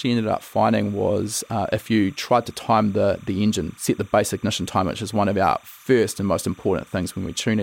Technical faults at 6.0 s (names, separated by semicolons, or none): timecode bleed